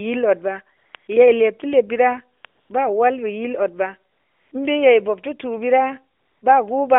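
A speech clip over AMR narrowband mobile coding, with AMR comfort noise: the phone judged the talker silent and stopped sending speech frames, so synthetic noise fills 0.78–0.94, 0.96–1.08, 2.42–2.44, 2.46–2.70, 4.12–4.52 and 6.18–6.42 s with a smooth, steady hiss switching in and out.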